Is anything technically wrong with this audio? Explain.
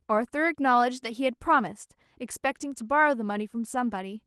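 No, nothing is technically wrong with this audio.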